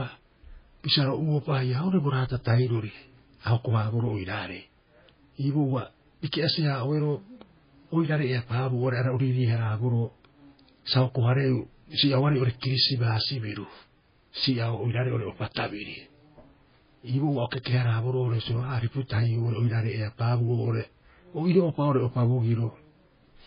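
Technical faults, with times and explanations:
Throughout, MP3 compression: there's nothing in the speech above 5 kHz, so it sounds dull and boxed-in, and the damage is heavy. The encoder was starved of bits, likely running at a very low bitrate around 16 kbps. It chopped the treble at a fixed point and kept dropping quiet frequency lines in and out between frames, which gives that watery, swirly texture, chirpy s sounds and smeared consonant onsets.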